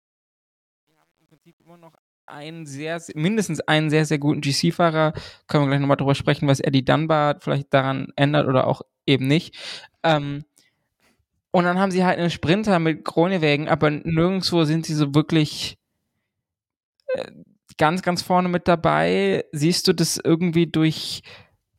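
The speech opens with truncation distortion on a fade. The fade-in runs from the start to 3.41 s. It is stepped at a coarse resolution, about 10 bits, without dither. From 0 to 2.43 s the quiet level turns gritty.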